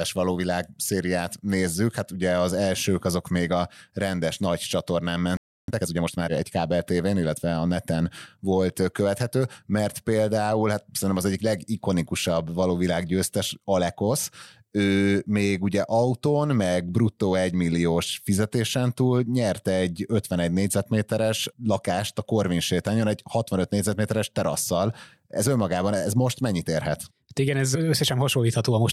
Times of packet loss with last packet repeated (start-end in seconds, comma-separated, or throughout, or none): none